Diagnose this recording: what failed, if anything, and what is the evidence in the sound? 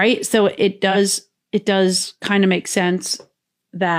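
The codec stage failed: AAC frame loss with concealment at 0.91 to 0.97 s, just before "it does kind of". A smeared, noisy patch about 43 ms long, which fits one lost frame, replaces the sound. The decoder rebuilt it from the previous spectrum, so there is no click or silent gap as in a buffer dropout.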